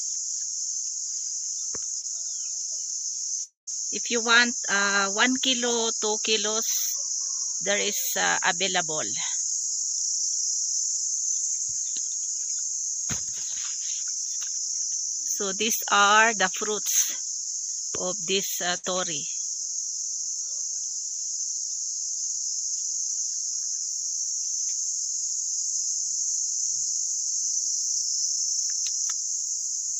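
A short concealed packet loss at 2.01 to 2.05 s smears the sound briefly: about 20 ms never arrived and was filled by continuing the preceding signal. On a spectrogram it shows as a thin band of repeated harmonics or blurred noise with slightly soft edges. From 3.43 to 3.69 s the sound turns into a fading buzz or hiss and then about 140 ms of near silence before resuming further on, with roughly 240 ms missing. This is likely a long network dropout. The waveform shows a decaying envelope into a flat stretch, and the spectrogram shows a smeared continuation fading to empty. A burst of packet loss at 18.77 to 18.85 s removes about 60 ms in a row. The receiver held and attenuated the last sound across the gap, so there is a short sustained buzz or hiss that tapers before the signal picks up again. It appears as a brief flattened, fading patch between intact regions.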